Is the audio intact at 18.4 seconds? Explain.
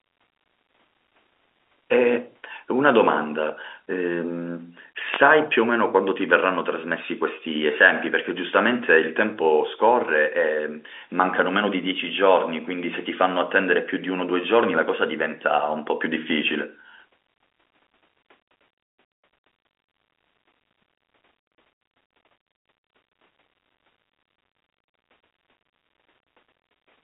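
Yes, at 18.4 seconds the speech is intact, carrying only the room noise about 47 dB below it and the narrow telephone band of G.711 telephone coding.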